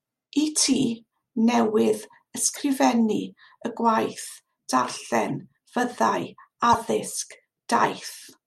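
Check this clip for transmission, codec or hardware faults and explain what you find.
The speech has one fault, corrupt frame decoded, occurring four times: 2.51–2.60 s, a short event at 3.62 s, another at 5.29 s, and the strongest at 6.70–6.82 s. Damaged bits in each compressed frame were decoded anyway, so misread gains and codes put energy at the wrong frequencies and produce short chirps, squeaks, blips or noise bursts. The 3.62 s event is very faint. Unlike a dropped frame, which leaves a gap or a concealed patch, stray sound is added instead.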